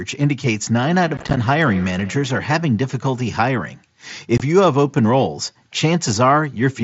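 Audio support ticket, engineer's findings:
Feedback echo between two devices, 0.88–2.79 s. Discrete repeats at roughly 150 ms intervals, up to about 19 dB below speech, each thinner and more ringing. A second device in the room replays the far mic outside the local echo canceller's reach. Unlike room reverb, the repeats are spaced, not a smooth tail.

Unconcealed Bluetooth headset packet loss, 1.17–1.37 s. Short holes with abrupt edges totalling 75 ms across 195 ms, the longest 15 ms, giving a chopped texture. Another 22.5 ms gap falls at 4.38–4.40 s. Headset-to-phone packets are dropped and nothing fills them. These are silent gaps, not the mild grain of the mSBC path.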